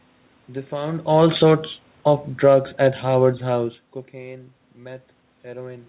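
Speech, carried over a call path with nothing above 4 kHz, which fits G.711 mu-law. From 1.03 s to 3.81 s the automatic gain is falling. The gain control judged the input too loud or its background noise too strong and lowered its gain gradually, by about 5 dB. The voice and the room noise sink together. Level shifts around 1 s and 3.5 s come from the talker moving.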